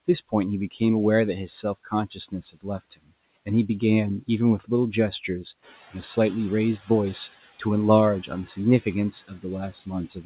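Right from the start you can hear noise suppressor artifacts running through the whole clip. The suppressor is pulling the steady background down by about 14 dB, band by band, frame by frame. So the noise drops away in the gaps and comes back up under the speech. Everything also sits below 4 kHz, which fits a narrowband call codec like G.711.

The first case of speech cut by the noise suppressor lands at 0.71 to 0.81 s. A soft bit of speech gets mistaken for noise and pushed down by up to about 15 dB, so it sounds swallowed. It happens again across 1.63 to 3.12 s, in scattered spots adding up to something like 0.4 s, with dips of up to about 18 dB that leave consonants and endings faint.

Around 5.5 s the room noise jumps by about 11 dB, and you get the noise suppressor catching up from 5.62 to 7.36 s. Its noise estimate lags the new level, so for those 1.74 s the louder background leaks through with less reduction, then settles as the suppressor adapts, ending up cutting it by about 11 dB.

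Speech cut by the noise suppressor turns up once more from 8.23 s to the end, with drops of up to about 15 dB making the quieter parts sound faint and swallowed.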